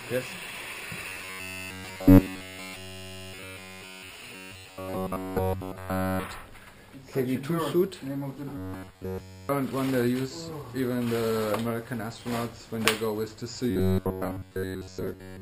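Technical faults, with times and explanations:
1.09–4.10 s, 4.35–6.24 s, 8.58–9.49 s and 13.71–15.41 s, robotic sound from repeated short buffers: the sound collapses into a rigid, metallic buzz near 94 Hz, covering nearly every moment of the first three stretches and most of the last. The likely cause is audio arriving too slowly, with the playback looping a slice of about 11 ms that forces this fixed pitch.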